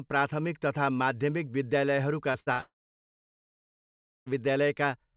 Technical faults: short concealed packet loss; burst of packet loss; long network dropout

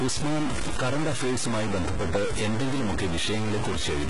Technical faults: stuck bit; HE-AAC compression

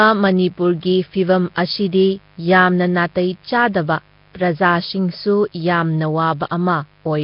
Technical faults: mains buzz; Nellymoser compression

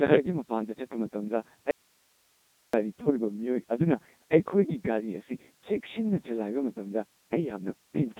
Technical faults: Codec 2 vocoder; audio dropout to a faint residue

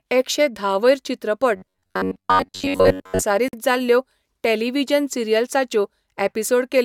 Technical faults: robotic sound from repeated short buffers; gap at a join of encoded pieces

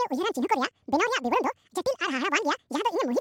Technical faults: audio read two samples at a time (double speed)

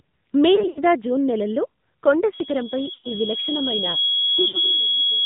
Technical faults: AMR narrowband mobile codec; lost AMR speech frames; loudspeaker feedback squeal

